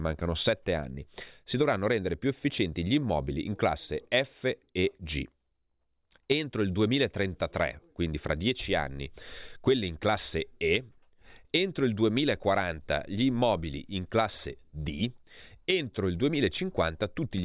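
No technical faults occur at any point, so there is nothing to describe in time order.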